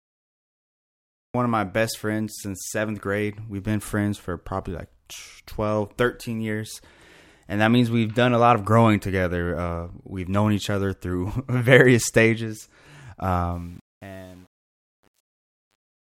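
The audio opens with a cut-off start: digital silence runs from 0.0 s to 1.34 s, and at 1.34 s the speech begins abruptly, already partway through a sound. There is no natural attack or lead-in, because capture began late and the opening of the utterance was never recorded. The result is a hard edge where the signal switches from nothing straight into the sound.

From 13.52 s to the end at 16.07 s, the fade-out carries truncation distortion. The fade's level follows a smooth curve down from roughly 13.5 s to 16.1 s, but the gain stage applying it kept too few bits and added no dither, which fits a resolution of about 9 bits. As the level sinks toward the smallest step, the waveform collapses into coarse staircase shapes, so from 13.79 s onward the tail turns gritty.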